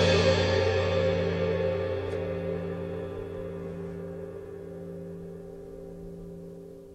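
No technical faults can be heard anywhere in this clip.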